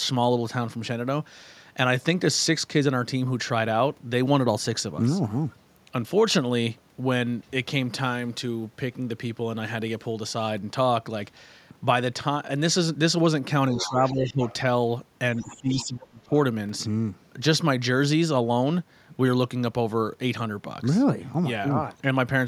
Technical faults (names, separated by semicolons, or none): speech suppressed in double talk; other side's voice leaking through